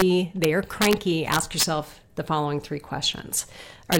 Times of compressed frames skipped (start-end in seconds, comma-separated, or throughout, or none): none